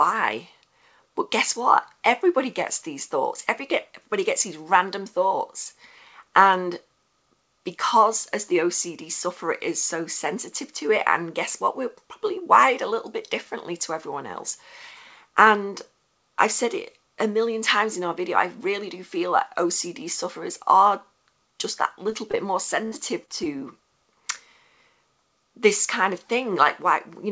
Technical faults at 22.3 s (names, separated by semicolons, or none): short concealed packet loss